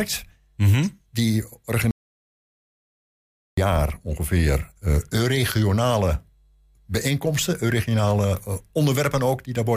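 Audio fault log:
1.91–3.58 s, audio dropout to silence: speech cuts off mid-flow into 1.7 s of dead digital silence with no room tone, unlike a natural pause, likely from a lost input link.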